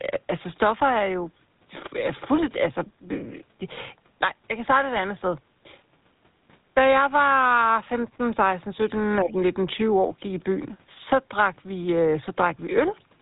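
Throughout, the speech sounds buzzy and gravelly with nothing above 3.8 kHz, the signature of the GSM full-rate codec, consistent with a 13 kbps stream. From 9.17 to 9.37 s, the voice dips by roughly 15 dB for about a fifth of a second, likely speech suppressed in double talk by the echo canceller.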